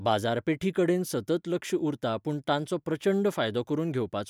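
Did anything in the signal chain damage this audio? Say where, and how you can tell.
No, nothing in the chain has left a mark on this speech that I can hear, so there's no stage to point at.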